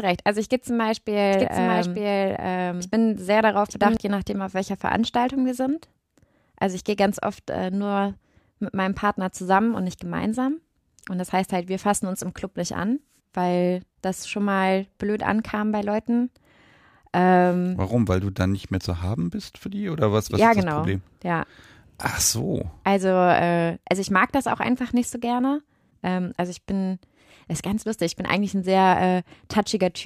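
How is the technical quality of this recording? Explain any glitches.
The recording has one clear glitch, a doubled audio track from 1.33 to 3.97 s, ending just before "je nachdem auf welcher". A second copy of the same audio, likely from a slower capture path or a misaligned edit, runs about a second behind at roughly equal loudness. The speech overlaps itself, with a dry full-band echo that cuts in and out abruptly.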